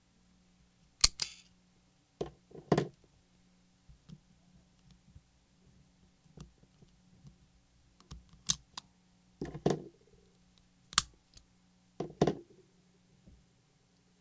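No technical faults are audible.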